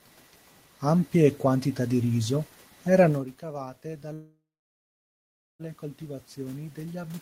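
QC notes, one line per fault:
3.41 s to end of clip, automatic gain rising: Just after "quantità di riso erano" the voice and the room noise swell together over a second or more, rising steadily rather than jumping. The talker moved away at about 3.0 s, dropping the level reaching the microphone by about 16 dB. The automatic gain control read the input as too quiet and slowly raised its gain to compensate, lifting the background along with the speech.
4.13 to 5.62 s, call audio freeze: The sound stops moving forward and the last fragment hangs on as a decaying buzz or hiss, then sits in near silence for about 1.2 s. Speech resumes at 5.62 s exactly where it left off, with nothing skipped. Packets were likely held up in transit and the jitter buffer ran dry. The receiver stretched out the last audio, inserting a 1.46 s gap that pushes everything after it later by that amount.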